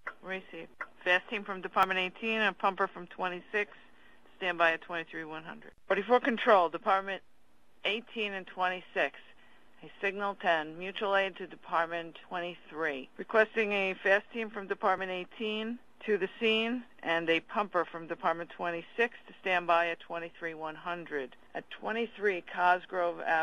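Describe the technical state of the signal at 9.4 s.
The signal is intact at 9.4 s, with no dropout, distortion, glitch or other technical fault audible at that moment.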